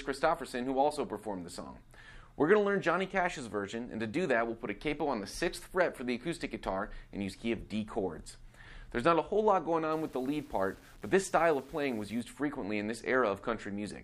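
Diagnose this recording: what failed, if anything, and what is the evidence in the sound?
The sample-format conversion stage likely reduced the audio to 8 bits with plain rounding and no dither. From 9.92 to 12.21 s, grainy distortion, roughly 30 dB below the signal, tracks the sound itself, roughening quiet passages as the error follows each level change.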